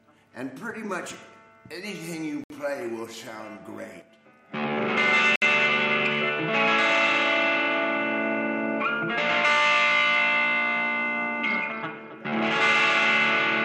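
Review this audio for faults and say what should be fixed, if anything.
A likely Bluetooth stall, where delayed wireless packets let the headphone buffer run empty, cuts the audio to silence for 64 ms at 2.44 to 2.50 s and 62 ms at 5.36 to 5.42 s before playback resumes. Keeping the source device close and clear of interference prevents it.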